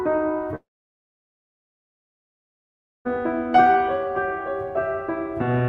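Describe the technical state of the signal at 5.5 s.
At 5.5 s the music comes through intact, with no dropout, glitch or other fault at that moment.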